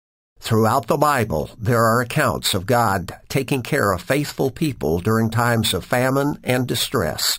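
Speech with imaging from sample-and-hold upsampling throughout. It sounds like a metallic fizz that tracks the voice. The audio fits a 12 kHz source raised to 48 kHz by repeating samples. A mirrored copy fills 6 to 12 kHz, about 15 dB below the signal.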